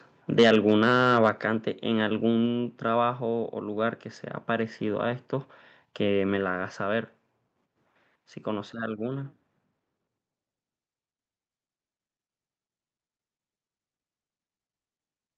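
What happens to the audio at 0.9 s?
At 0.9 s the speech is in the middle of a burst of microphone overload running from 0.39 to 1.29 s. The input level was likely set too high, driving peaks about 6 dB past the converter's limit. Their tops are flattened, leaving a harsh, crackling edge.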